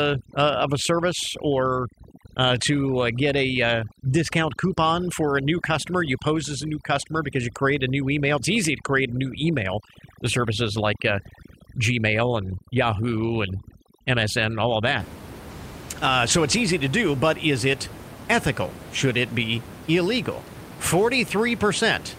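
The clip is speech, and from 0.0 to 15.0 s it suffers from overdone noise removal. A noise reduction stage was set far too aggressively. Any frequency band close to its noise estimate is pulled down hard or switched off. The quiet parts of the speech are caught as well. The background drops and breaks up into twinkling specks. After 15.0 s the room noise returns, sitting about 15 dB below the speech.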